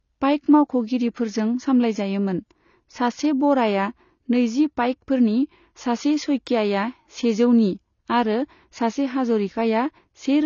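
AAC compression runs throughout this speech recording: nothing survives above 7 kHz, and the sound is dull and smeared, likely from AAC-LC coding at a bitrate that points to roughly 24 kbps.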